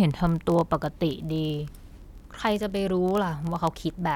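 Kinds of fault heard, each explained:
Word clock ticks: the receiver runs on its own clock, off the sender's by something like a thousand parts per million, so one sample slips each time the clocks pass. The speech carries sharp ticks roughly every 20 ms from 0.11 to 4.15 s.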